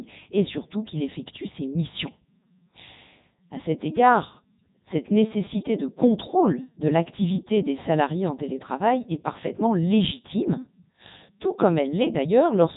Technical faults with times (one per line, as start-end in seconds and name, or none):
0.00-12.77 Codec 2 vocoder